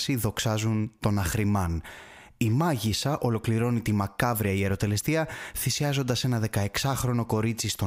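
Listening to the speech recording, nothing stood out as a technical problem at any point.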